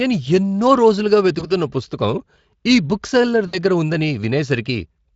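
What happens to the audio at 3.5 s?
VoIP packet loss concealed by the speech codec occurs from 3.47 to 3.58 s, after "ఈ బుక్ సెల్లర్". About 60 ms went missing. The decoder extrapolated the last sound, producing a fading smear.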